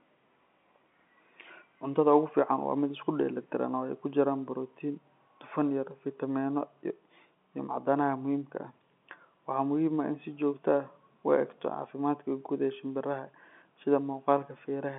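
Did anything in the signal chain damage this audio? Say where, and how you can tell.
No, the chain left the speech intact, and its narrow telephone band of roughly 200 Hz to 3.4 kHz, with nothing above 3.7 kHz and only the faint, level-following hiss of logarithmic 8-bit coding, points to an ordinary 64 kbps G.711 mu-law line doing its normal job.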